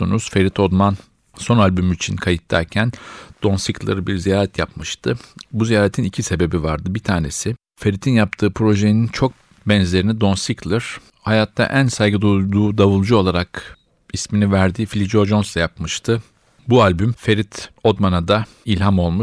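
Nothing goes wrong anywhere in this speech recording, so there's simply no fault to point to at any moment.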